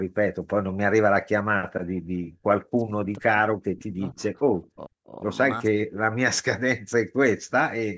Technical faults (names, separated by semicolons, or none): background gated by the echo canceller; speech suppressed in double talk